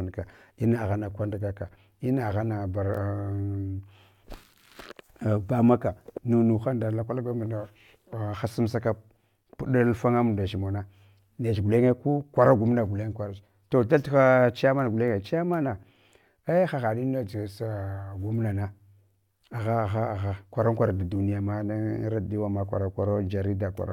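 A speech recording with nothing technically wrong with it.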